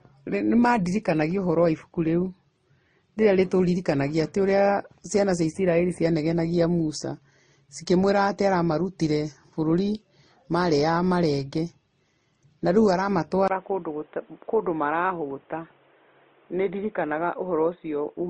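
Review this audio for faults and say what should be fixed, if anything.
Throughout the speech, transcoding between lossy codecs leaves two kinds of artefact heard at once, and nothing survives above 9.7 kHz. The sound points to a likely MP3 encode at around 32 kbit/s that was re-encoded to Opus at 24 kbit/s. Stacked textures set this apart from a single low-bitrate encode. Encode once, from the original source.

At 13.48 s, after a 20 ms silence, the input is switched to a poorer device, with the likely cause being a change of microphone or a headset's call profile. From there to 18.30 s the band stops at 3.8 kHz, the level drops about 5 dB, and new noise sits about 35 dB below the speech. A filter alone would not bring the gap, level change or new noise. Lock the input device for the whole session.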